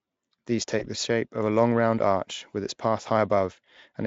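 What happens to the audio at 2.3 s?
Nothing goes wrong at 2.3 s: the speech continues intact through that moment, carried by the Speex codec without any dropout, glitch or other fault.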